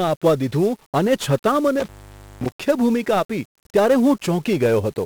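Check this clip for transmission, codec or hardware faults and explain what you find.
Two faults are present: heavy 1-bit DFPWM compression across the whole speech clip, and an intermittent contact dropout near the two-second mark.

1-bit DFPWM compression, throughout: each sample is reduced to a single bit that nudges an adaptive level up or down, so the waveform is only roughly traced. The hiss and coarse texture fit a 48 kbps DFPWM stream. The resulting quantisation noise is heavy and broadband. The speech sounds fuzzy and crackly, with its upper frequencies swamped by hiss.

Intermittent contact, 1.80 to 2.50 s: a loose connection opens for about 0.52 s within this span, so the signal path is briefly broken. The speech drops out abruptly, with crackle as the contact breaks and remakes, and only faint hiss remains while the line is open.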